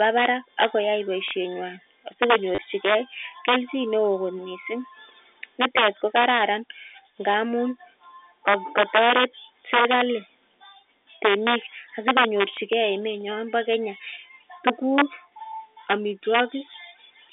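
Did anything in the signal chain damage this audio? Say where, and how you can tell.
Yes. The loudest moments crack violently throughout the clip. This is integer overflow, most likely in a gain or sample-format conversion stage. The signal was pushed about 7 dB past full scale, and instead of limiting there, the affected peaks wrapped round to the opposite sign. Only a small fraction of samples, under one percent, cross the limit. On a waveform those peaks jump from one rail straight to the other. A spectrogram shows them as bright full-height vertical streaks, harsher than clipping.

There is also packet loss with the last packet repeated, at the network stage. The longest event runs from 2.55 to 2.58 s, about 30 ms, which fits three 10 ms packets replayed. That run gives a short robotic stutter with a buzz near 100 Hz. Single 10 ms repeats occur at 5.76 s, just before "ko kararan ngamun", and at 16.73 s. 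A waveform shows identical repeated blocks, and a spectrogram shows thin vertical lines at each seam. Above the damage, the 300 to 3600 Hz telephone band of the G.711 line is visible.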